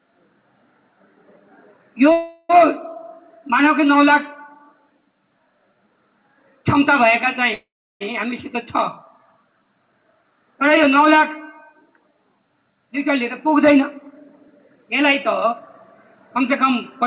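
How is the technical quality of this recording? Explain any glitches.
The recording has four glitches of two kinds, heard over narrowband call audio with nothing above 4 kHz, which fits a G.711 A-law codec at 64 kbps.

Call audio freezes at 2.12 to 2.52 s and 7.54 to 8.03 s: the sound stalls, and the last moment is stretched into a fading buzz or hiss. The second one drops to silence for about 340 ms. The cause is likely delayed packets emptying the jitter buffer. Playback then resumes where it stopped, so a gap is inserted rather than audio lost.

Jitter buffer speed-ups at 12.72 to 14.48 s (105% speed, about a tenth of a second removed) and 16.36 to 17.04 s (110%): tiny pitch-period slices are cut repeatedly to shrink a swollen buffer. Unlike a freeze, nothing stops. The sound just feels hurried, at unchanged pitch.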